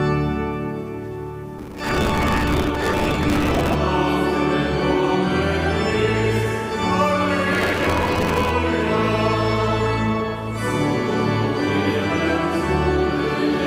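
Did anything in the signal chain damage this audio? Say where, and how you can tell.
Yes, processor overload crackle from 1.59 to 3.75 s and again from 7.52 to 8.5 s, at the driver or buffer stage. Both stretches carry a gritty, tearing crackle that starts and stops abruptly. The audio thread was missing its deadlines on very short buffers of around 5 ms, many in a row. Each miss replayed a fragment of old audio with hard edges, and those repeated clicks merge into a rough texture.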